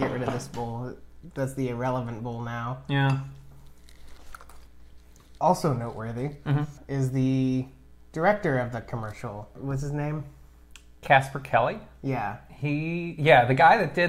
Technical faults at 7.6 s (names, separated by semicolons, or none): none